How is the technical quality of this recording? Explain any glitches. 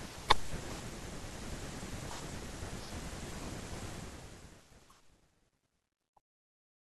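The recording has one clear glitch, on the closing fade-out. From 3.90 s to the end, the speech turns gritty as it fades, and from about 4.72 s the grit is at its worst. This is truncation distortion on a fade. The fade-out that begins around 4 s is applied without dither at too few bits, which fits a 12-bit stage. Near the smallest step, the waveform collapses into coarse square steps.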